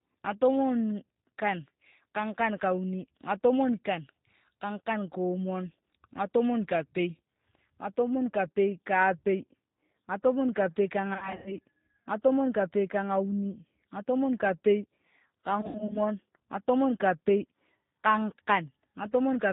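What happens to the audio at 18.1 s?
Nothing new at 18.1 s, just the G.729 codec damage running throughout: speech rebuilt from a vocal-tract model and sparse pulses, cut above 4 kHz, plainly rough and synthetic.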